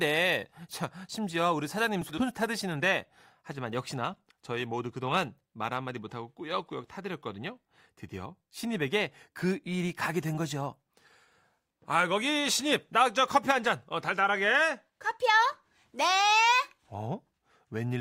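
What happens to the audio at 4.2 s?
At about 4.13 to 4.20 s the speech suffers frames out of order. Two neighbouring blocks, each around 40 ms and consistent with two frames apiece, were decoded in swapped order, so this short stretch plays with its halves exchanged. It comes out as a brief garbled flutter. On a spectrogram the formant tracks jump backward then forward, and the clip loses no time.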